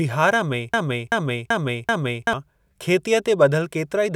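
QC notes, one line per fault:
0.74–2.33 s broken-record loop: a 384 ms speech fragment repeats four times, likely from a stalled stream resending its last buffer, so the intended speech is lost.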